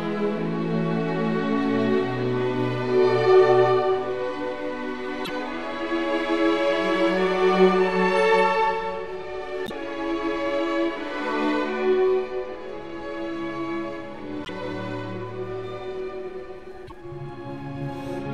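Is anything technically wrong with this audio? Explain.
Yes. A broken MP3 bit reservoir is the likely cause: dropped frames left later frames reading borrowed data from the wrong bytes. The sound skips ahead with a garbled break lasting about two 26.1 ms frames, at 5.24–5.30, 9.65–9.71, 14.43–14.49 and 16.86–16.92 s.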